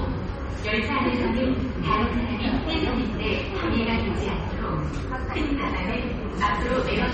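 From start to end, the audio has no content above 8.3 kHz. The treble stops at a hard wall. The remaining sound is plainly damaged. It has a watery, swirling quality, with metallic chirps on bright, hissy parts. Sharp attacks come across blurred rather than crisp. This is likely MP3 compression. Starved of bits, the encoder discarded the top band and let weak frequency detail drop in and out between frames. The damage fits a very low bitrate, near 32 kbps.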